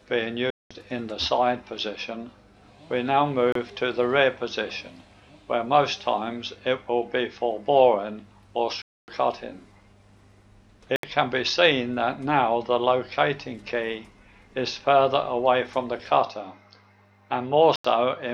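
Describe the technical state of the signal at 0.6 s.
At 0.6 s the signal sits inside a Bluetooth dropout running from 0.50 to 0.71 s, likely caused by audio packets failing to reach the headphones in time and being discarded. About 0.2 s of output is missing, which fits a run of around 14 lost packets. The sound cuts to silence, and when it returns it has moved ahead as if it had kept playing through the gap.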